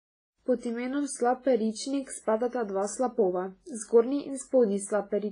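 Throughout the speech, the sound is ringing and washy, with a hiss that swells and fades with the signal, and nothing is present above about 10.1 kHz. This is heavy damage that points to WMA compression, likely WMA 1 at a low bitrate around 24 kbps. Long transform blocks smear quantisation noise over tens of milliseconds. On a spectrogram, the top is cut flat at 10.1 kHz, with patchy holes where weak components were zeroed. Smears also sit before and after onsets.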